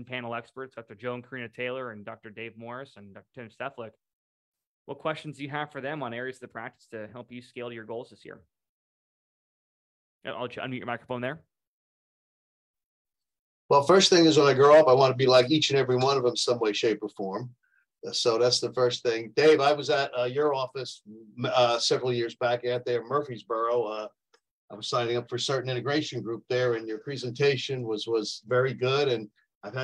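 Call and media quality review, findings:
Nothing to flag here; no audible faults turned up anywhere in the clip.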